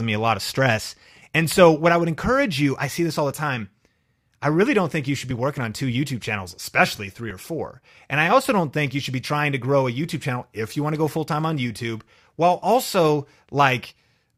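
At 1.32, 3.32, 5.31, 7.31, 9.30, 11.29 and 13.29 s, just after "a lot of stress", "see this all the" and "while also", an overlap between stream segments trims a few milliseconds at each 2 s boundary, causing a tiny skip. Unlike packet-loss dropouts, there's no gap, and the spacing is strictly regular.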